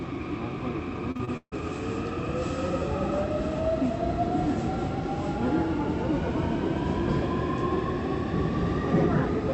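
Repeated packet loss (robotic sound) runs from 1.11 s to 1.54 s. Packets kept going missing or arriving late, and each hole was covered by stretching the preceding sound, so about half of that stretch is concealment rather than real audio. The longest gap is 148 ms. The sound turns choppy, with pieces dropping out, inside a call path whose top end stops at 8 kHz, which fits Opus at a modest bitrate.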